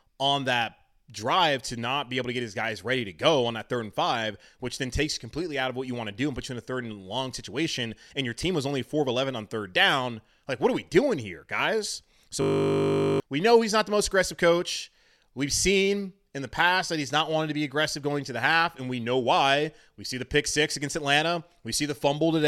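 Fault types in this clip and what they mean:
System hang loop: at 12.42–13.2 s a frozen driver replays one 20 ms buffer, producing a steady 50 Hz buzz that replaces most of a second of speech.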